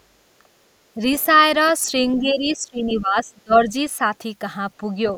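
At 0.96 to 1.01 s the speech dips briefly by about 5 dB, and from 2.18 to 3.74 s it is pushed down much harder, by about 25 dB. Both are speech suppressed in double talk, likely where the echo canceller confused the talker with loudspeaker echo and attenuated everything. Between them, at 1.68 to 1.72 s, a faint scrap of the other side's voice leaks through, about 30 dB below the speech, likely residual loudspeaker echo left in the microphone signal.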